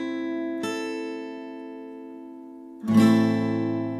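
Nothing goes wrong anywhere in this one, so there's no fault to point to at any moment.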